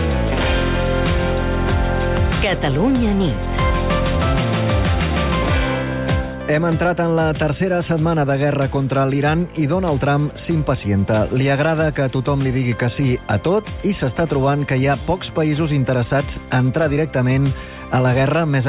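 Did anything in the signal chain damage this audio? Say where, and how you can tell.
No, nothing in the signal chain damaged this audio.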